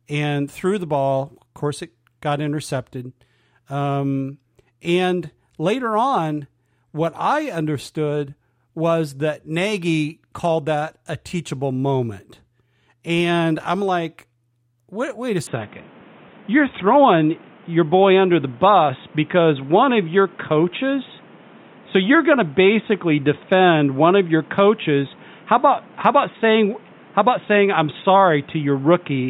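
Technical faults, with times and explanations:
15.47 to 29.29 s, input switched to a poorer device: at 15.47 s the speech abruptly turns narrower and boxier, with no gap at the changeover, and stays so to the end. The likely cause is a change of capture device. Nothing above 3.8 kHz survives, so a spectrogram shows the upper band cut off flat from that point. The level shifts by roughly 5 dB, visible as a step in the waveform envelope, and a new noise floor appears about 30 dB below the speech.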